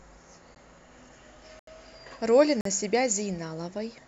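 At 0.55 s the speech drops to a block of digital silence lasting about 13 ms, heard as a tick. Two longer blocks follow, 80 ms from 1.59 to 1.67 s and 44 ms from 2.61 to 2.65 s, each a short hole. The samples were replaced by silence with no fade. The waveform shows flat lines cut in abruptly, and the spectrogram shows blank vertical bands edged by broadband streaks.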